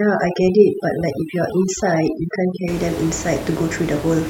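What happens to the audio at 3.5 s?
At 3.5 s the speech carries on intact, with only the room noise sitting about 13 dB below it.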